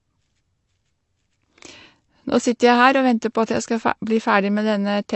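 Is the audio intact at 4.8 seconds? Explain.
No. At 4.8 seconds, as throughout the speech, the likely cause is AAC compression at a low bitrate, consistent with about 32 kbps. Nothing passes above 8.1 kHz, so the sound is dull and smeared, with a warbling, fizzy texture on sibilants.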